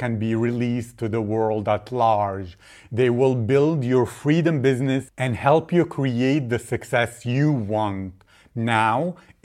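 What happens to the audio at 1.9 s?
Nothing goes wrong at 1.9 s; the speech plays through that moment intact, with no dropout, click or distortion.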